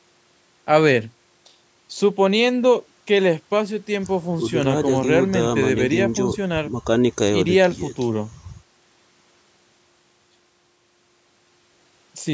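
Speech recorded through a call's microphone processing, with the lowest bass rolled off by its high-pass filter and nothing above 8 kHz, and no technical faults anywhere in the signal.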